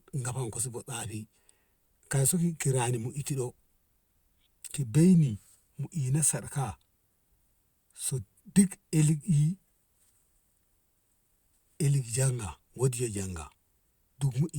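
No technical faults can be heard anywhere in the recording.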